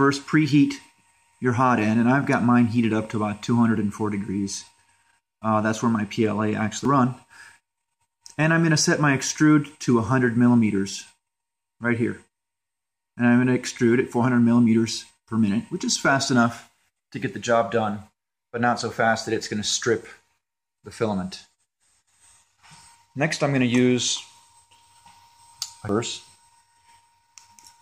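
The audio carries two brief bursts of damaged data in a compressed stream, at 6.85 s and 25.89 s. Corrupt bytes in the encoded file make the decoder misread a frame, lose sync and hunt for the next valid header.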